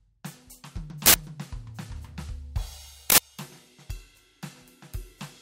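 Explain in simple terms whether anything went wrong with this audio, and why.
The music is hit twice by an uninitialised buffer, from 1.06 to 1.14 s and from 3.1 to 3.18 s. Each time, an 80 ms block played before the music was written into it. Leftover memory came out as a sudden, loud crack or burst of digital noise.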